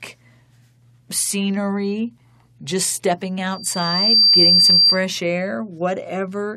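A speech recording with loudspeaker feedback squeal from 3.51 s to 5.02 s: a single tone at 4.7 kHz swells over roughly 0.7 s until it sits about 10 dB above the speech. The microphone is hearing its own loudspeaker, and at that frequency the loop gain tops one, so the tone feeds itself. A spectrogram shows one bright horizontal line brightening, and the waveform's envelope climbs steadily.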